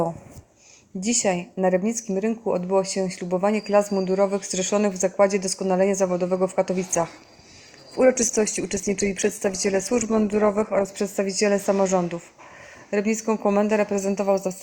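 An adaptive stream at a lower bitrate took over from 6.88 to 10.88 s: quality abruptly drops and artefacts rise, fitting roughly a 64 to 16 kbit/s Opus drop, with no gap.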